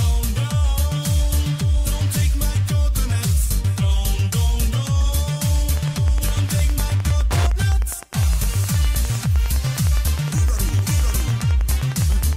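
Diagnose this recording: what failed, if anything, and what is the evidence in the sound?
Wi-Fi interference enters at the analogue wiring from 5.74 s to the end: a steady tick every 102.4 ms, about ten per second, roughly 20 dB below the signal. The circuit rectifies a nearby radio's beacon. A spectrogram shows evenly spaced vertical broadband lines, and the waveform shows regular spikes.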